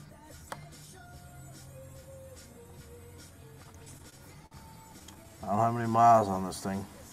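From 3.63 to 4.53 s the sound catches and drags in six small hitches, the longest about 50 ms, then again from 4.99 to 5.59 s in five briefer ones of up to 11 ms. These are repeated stalls (stutter): late packets kept draining the jitter buffer, and the receiver stretched the last sound until data arrived, so nothing is lost. From 5.74 to 6.32 s the audio turns drawn-out and sluggish at unchanged pitch, running at 88% speed. This is a jitter buffer slow-down: the receiver repeated single pitch periods to rebuild its reserve, adding about 80 ms.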